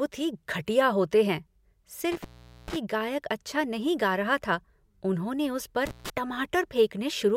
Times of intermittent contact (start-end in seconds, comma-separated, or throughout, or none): 2.12-2.76, 5.86-6.10